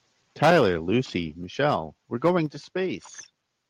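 From 0.42 to 0.68 s the input gain was likely set too high for the converter, causing microphone overload. Peaks overshoot full scale by about 9 dB, and roughly a tenth of the samples have their tops sliced flat, so the loudest speech takes on a harsh, crackling edge.

At 0.45 s the call software likely reacted by stepping the microphone volume down by about 2 dB, an abrupt drop that pulls speech and background down together. At 1.44 s it likely stepped the volume down again, by about 3 dB, giving another sudden dip in level.

From 2.25 to 2.3 s a shorter microphone overload, likely from the input still running hot, pushes peaks about 4 dB over full scale with around a tenth of the samples clipped, adding a brief rasp.

At 2.46 s the volume was likely stepped down once more, by about 5 dB, the steepest of the three sudden sags in overall loudness.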